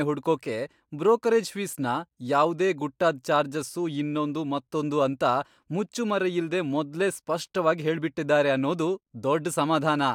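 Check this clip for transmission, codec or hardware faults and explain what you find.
Nothing in this speech recording points to a fault anywhere along its chain. There is no event to report at any point in it.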